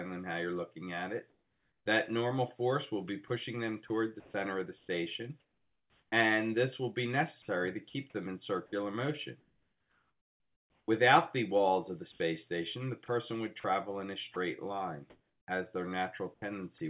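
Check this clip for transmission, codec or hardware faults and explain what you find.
Two kinds of fault are audible, both tied to pauses in the audio, over a call path whose content stops at 4 kHz, as a G.711 narrowband link would.

Comfort noise in place of the background is heard from 1.3 to 1.86 s, 9.4 to 10.88 s and briefly at 12.12 s. Each time, the natural background gives way to a flat, textureless hiss: about 5 dB quieter in the first gap, about 9 dB quieter in the second, and about 2 dB louder in the short third one. The likely cause is discontinuous transmission: the sender stopped sending during silence, and the receiver synthesised noise roughly matched to the background.

Sound chopped by the voice detector occurs from 3.28 to 6.12 s, 7.42 to 7.94 s, 13.06 to 15.48 s and 16.34 to 16.8 s. Within these stretches, soft passages and the edges of sounds drop out and are replaced by the same synthetic hiss, so the audio stutters. 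About a second is lost in the first stretch, roughly half a second in the third, and a tenth of a second in each of the others. This is likely the sender's activity detector repeatedly misjudging quiet sound as silence and switching transmission off and on.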